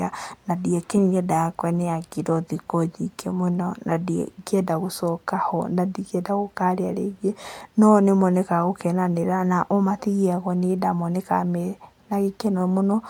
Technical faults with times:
none

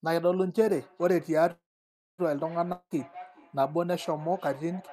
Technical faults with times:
0.68-4.93 feedback echo between two devices
1.51-2.21 call audio freeze
2.72-2.93 long network dropout

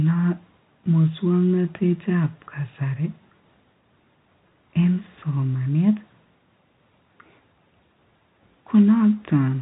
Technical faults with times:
none

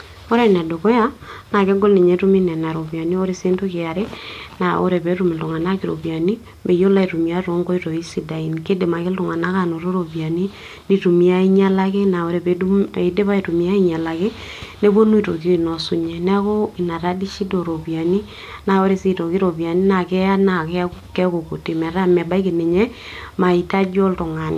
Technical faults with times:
none

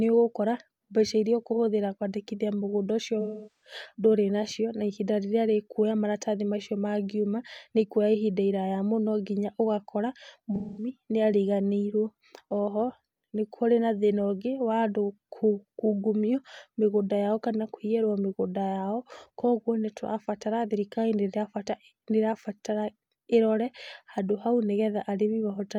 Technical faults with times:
3.21-3.74 AAC frame loss with concealment
10.55-10.89 AAC frame loss with concealment

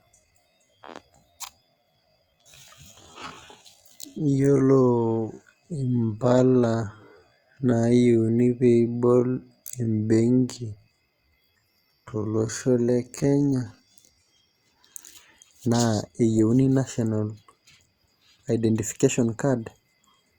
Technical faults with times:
0.00-14.26 time-stretched section

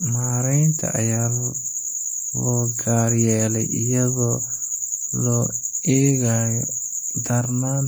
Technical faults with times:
none

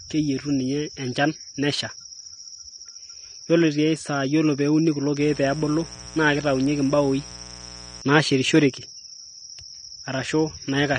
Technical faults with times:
0.00-10.98 AAC compression
5.20-8.02 mains buzz

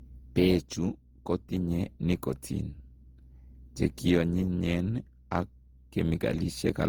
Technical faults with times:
0.00-6.88 generation loss

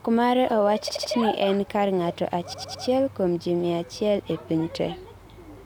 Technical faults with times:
0.88-1.11 repeated frames
2.52-2.84 repeated frames
4.31-5.66 drift correction step

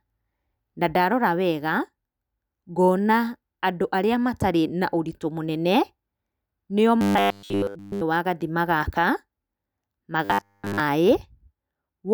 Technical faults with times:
7.01-8.01 robotic sound from repeated short buffers
10.25-10.80 robotic sound from repeated short buffers

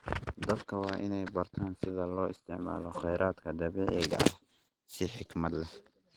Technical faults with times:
0.00-6.16 Opus compression

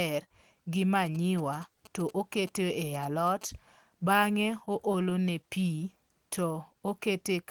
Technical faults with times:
1.06-3.43 GSM signalling bursts
4.65-5.79 scattered short gaps

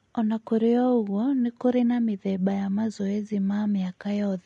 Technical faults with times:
0.00-4.46 low-delay AAC compression

